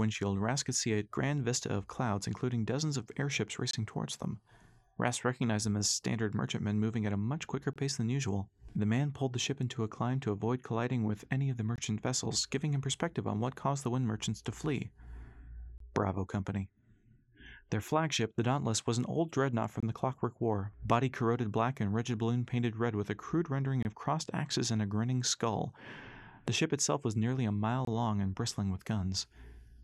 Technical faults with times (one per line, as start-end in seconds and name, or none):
3.71-3.73 gap between chunks
7.73-7.76 gap between chunks
11.76-11.78 gap between chunks
15.78-15.80 gap between chunks
19.80-19.83 gap between chunks
23.83-23.85 gap between chunks
27.85-27.87 gap between chunks